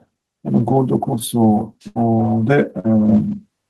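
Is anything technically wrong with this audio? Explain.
Yes. There are two bursts of packet loss and one step up in microphone volume.

Bursts of packet loss occur at 1.87 to 1.98 s and 2.79 to 2.89 s. Audio arrived too late or not at all. The receiver stretched the last sound and faded it, for about 79 ms and 46 ms. Then the sound jumps ahead, skipping about 80 ms and 40 ms.

The microphone volume steps up at 3.09 s. The call software judged the input too quiet and raised the device level in a single jump. The speech and the background both get louder together, by about 5 dB, with no gradual ramp.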